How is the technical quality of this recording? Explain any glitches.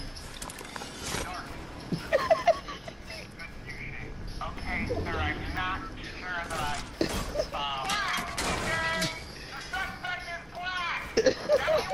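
The recording has one clear technical problem: periodic USB or driver dropouts running almost the whole way through. From about 0.09 s to 11.57 s, something stalls the USB link or the audio driver every 0.499 s, roughly twice a second, and around a millisecond of audio just gets skipped each time, about twenty times in all. The waveform jumps across the gap, so you hear a steady train of ticks, evenly spaced like a metronome, and they show up only where there's sound to break.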